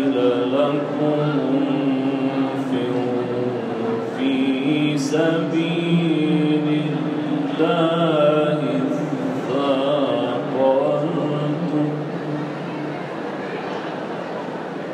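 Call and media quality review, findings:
No audible faults found.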